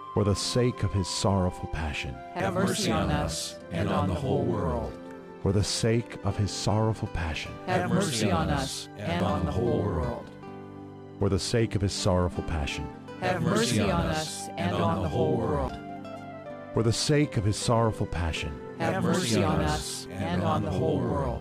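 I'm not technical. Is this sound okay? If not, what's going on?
No. The recording software likely fell behind and lost chunks of audio before saving them, a fault called a dropped buffer (overrun). At 2.4, 9.2 and 15.68 seconds the sound jumps ahead, skipping roughly 40, 70 and 100 milliseconds.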